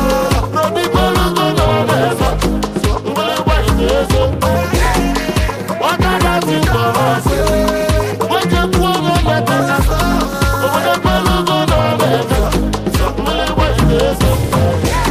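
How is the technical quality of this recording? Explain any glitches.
Technical quality is marred by one fault running through the whole recording. Throughout, a rough, metallic edge rides on the sound, harshest in high content and gone in silence. This is periodic clock jitter: the converter clock wobbling at around 300 Hz, spawning sidebands at that spacing.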